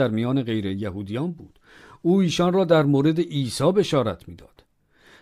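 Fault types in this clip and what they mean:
No faults can be heard anywhere in this speech.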